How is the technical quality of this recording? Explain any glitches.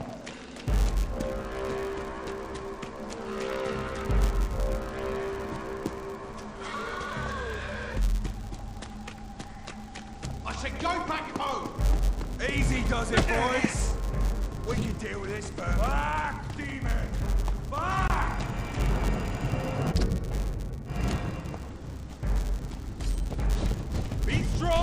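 The recording has one steady fault running through its whole length. The filter is restarted on every block, so each block begins from silence, leaving a small transient every 10 ms: a 100 Hz buzz that rises and falls with the level, seen as evenly spaced spikes on the waveform and vertical lines in the spectrogram.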